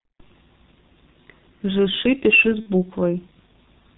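From start to finish the speech sounds muffled and hoarse, with consonants smeared and nothing audible above about 4 kHz. This is the G.723.1 codec at work: it compresses speech into 30 ms frames and rebuilds the voice from a slowly updated model, and the heavy damage here fits its 6.3 kbit/s mode. Fine detail and crisp onsets are lost, leaving a dull, rough quality throughout.

From 2.60 to 2.68 s the voice is briefly stretched into a buzzy tone or coloured noise that fades out instead of carrying on naturally. This is VoIP packet loss concealed by the speech codec. The gap lasts about 60 ms, which points to two lost 30 ms frames, and the decoder filled it by repeating its last pitch and filter settings at falling gain. Because each frame builds on the one before, the sound stays weak or distorted for tens of milliseconds after the gap.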